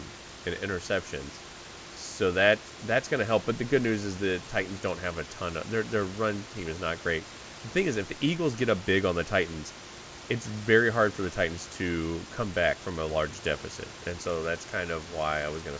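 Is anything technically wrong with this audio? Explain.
No, nothing is technically wrong with this audio.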